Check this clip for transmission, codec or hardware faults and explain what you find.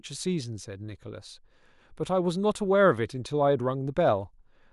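Nothing in the recording points to a fault of any kind. The speech comes through with no audible disturbance that would call for an explanation.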